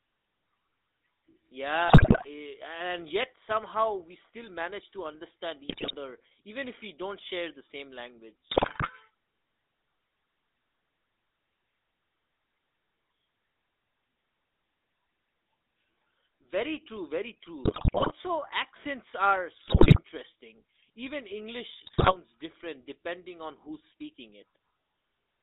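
From the first second the speech carries the GSM full-rate codec sound, which fits the 13 kbps full-rate coder. The band runs from about 250 Hz to 3.7 kHz. The coder rebuilds the voice from a vocal-tract filter fed by a sparse, regularly spaced pulse excitation, which gives a plainly audible buzzy, gravelly grain. On a spectrogram the energy stops sharply near 3.7 kHz, thins out below 250 Hz, and the harmonics look smeared and rough.

GSM bit errors then break through at 1.88–2.26 s, 5.68–5.96 s, 8.50–8.90 s, 17.64–18.12 s, 19.68–20.00 s and 21.86–22.15 s. Each burst lasts roughly 0.3 to 0.5 s. Corrupted filter, pitch and gain values garble successive 20 ms frames, so the voice squawks, pops and gargles. On the waveform these show as sudden level spikes and dropouts. On the spectrogram they appear as blotchy, misplaced formant bands that jump from frame to frame.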